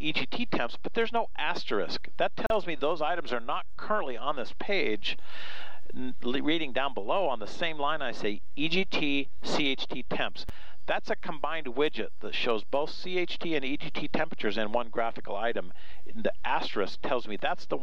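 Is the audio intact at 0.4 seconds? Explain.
Yes, the audio is intact at 0.4 seconds, with no dropout, click, distortion or other fault at that point.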